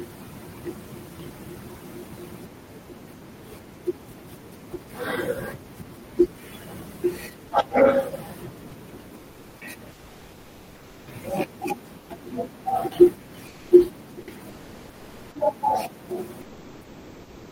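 Comfort noise in place of the background at 9.15–9.61, 9.93–11.07, 11.99–12.09, 13.47–13.71, 14.49–15.35 and 16.41–17.51 s: in each pause the real room background gives way to a flat, featureless hiss about 2 to 6 dB quieter. The likely cause is discontinuous transmission, as in Opus, where the receiver synthesises filler noise while the sender is silent.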